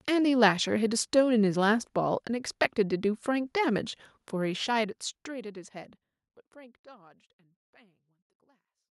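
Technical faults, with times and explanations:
No technical faults can be heard in this speech.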